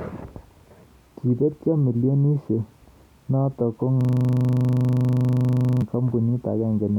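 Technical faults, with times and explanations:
4.01–5.82 s, system hang loop: a 40 ms piece of speech repeats about 45 times, giving a 25 Hz buzz. The spectrogram shows identical stripes every 40 ms.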